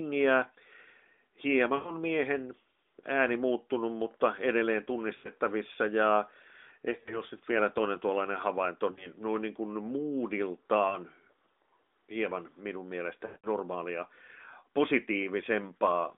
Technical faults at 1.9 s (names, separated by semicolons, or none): lost AMR speech frames